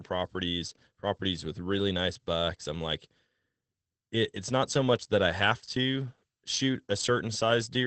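A speech recording carrying Opus voice compression from start to finish. Content stops at about 8.6 kHz, consistent with wideband SILK, the linear-prediction mode, and the coarse coding of the excitation is plainly audible as a muffled, slightly hoarse and robotic quality to the speech. The overall level of damage fits a low rate of around 12 kbps with 20 ms frames.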